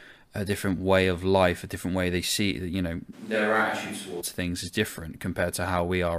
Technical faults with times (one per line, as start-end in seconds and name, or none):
3.15-4.20 switch to a distant microphone